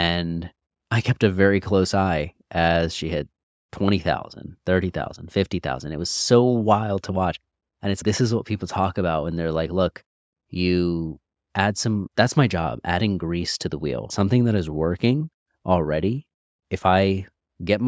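The speech carries no technical faults: it has passed through a call's microphone processing, which trims the lowest bass and leaves nothing above 8 kHz, as that path normally does.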